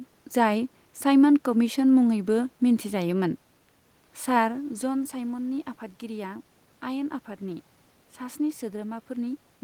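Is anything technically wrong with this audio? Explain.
No, nothing technically wrong can be heard in this speech recording; the background room noise belongs to the space where it was made, and the change in level about halfway through comes from the talker shifting position relative to the microphone, not from the recording chain.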